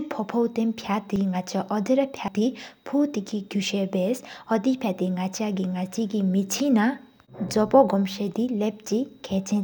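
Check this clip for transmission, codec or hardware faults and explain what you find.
Two brief faults occur, at 1.16 s and 2.28 s. Each is likely a dropped buffer (overrun), where the hardware overwrote about 70 ms of samples before capture. The speech jumps ahead with no gap.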